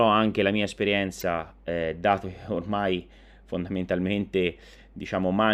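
Brief glitches break into the speech at 1.20 to 1.23 s and again at 5.01 to 5.03 s. Both come from damaged data in the compressed stream: corrupted frames are misread by the decoder, which loses sync and hunts for the next valid frame header.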